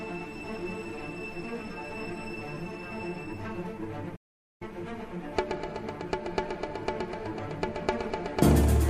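At 4.15 s the audio halts mid-flow and stays silent until 4.62 s, a gap of about 450 ms, before carrying on. This is a playback stall, likely caused by the player running short of data or its output thread being held up, so nothing reached the output until it recovered. Unlike a brief dropout, which lasts only a few milliseconds, this silence is long enough to register as a distinct pause rather than a click or stutter.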